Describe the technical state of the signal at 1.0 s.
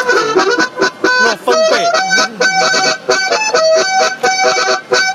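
At 1.0 s the signal shows gain pumping, which runs through the whole clip. The likely cause is input gain set far too high for the microphone, with a fast limiter or compressor clamping down whenever something loud arrives. Each loud sound drags the level down by about 10 dB, so quiet and loud parts sit unnaturally close together and the audio sounds squashed and breathing.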